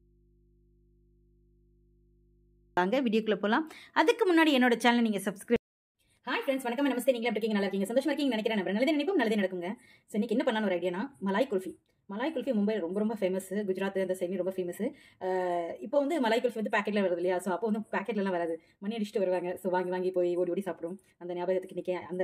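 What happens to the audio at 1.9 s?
At 1.9 s the audio is in an audio dropout to a faint residue, already under way when the clip opens and ending abruptly at 2.77 s. Only mains hum remains, roughly 35 dB below the signal, likely because the source was lost while the path stayed live. Unlike a pause or fade, the hum persists and the return is sudden.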